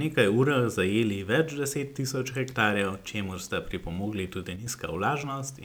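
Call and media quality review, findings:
One channel drops out, likely a stereo path fault, 4.56 to 4.67 s. The speech level in the mono sum falls abruptly by about 6 dB, then returns.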